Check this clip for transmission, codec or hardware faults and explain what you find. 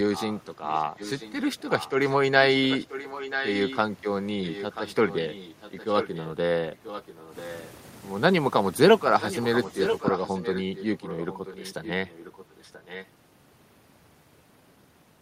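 The clip has one recurring fault, an echo leak, heard at 0.15–1.33 s, 1.79–2.16 s, 2.51–3.78 s, 4.47–6.31 s, 6.74–7.66 s and 9.2–13.07 s. A quieter copy of the speech trails the original by about 0.98 s, roughly 15 dB down, rising to about 10 dB down at 2.51–3.78 s and 9.2–13.07 s. The likely cause is a far-end loudspeaker whose echo canceller let its microphone pick-up return. On a spectrogram, the harmonic pattern reappears faintly about a second later. The waveform shows low-level speech-like energy filling the gaps between phrases.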